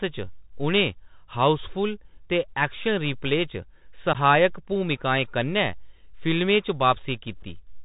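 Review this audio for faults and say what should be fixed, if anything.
The speech carries the Bluetooth CVSD headset codec from start to finish, and the damage is plainly audible. CVSD encodes each sample as a single up-or-down bit with an adapting step, so nothing above 4 kHz survives, sibilants turn scratchy, and a granular hiss sits under the speech; the sound fits a 64 kbps CVSD link. Unlike ordinary low-pass filtering, the hiss and slope-overload grit track the speech level. Preventing it means using a wideband headset mode such as mSBC or LC3.

Unconcealed Bluetooth headset packet loss cuts two short holes, at 4.13 s (about 15 ms, likely a few packets) and at 7.43 s (about 7.5 ms, a couple of packets). Nothing fills these gaps, so the audio drops to silence or an idle pattern with hard edges, and the speech returns briefly quieter as the CVSD step size rebuilds. This decoder recovery separates it from an editing dropout, which resumes at full level. 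A stronger link, or a receiver with packet-loss concealment, would prevent it.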